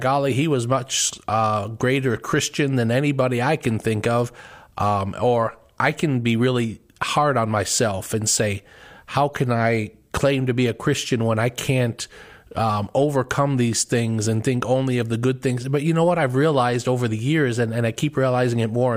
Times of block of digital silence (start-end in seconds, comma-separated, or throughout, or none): none